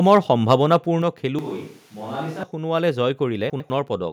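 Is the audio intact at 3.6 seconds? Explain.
No. Between 3.5 and 3.7 s there are chunks out of order: one 100 ms chunk arrived a slot late and plays after the chunk that should follow it. Nothing is lost, but three hard joins make the speech briefly jumbled.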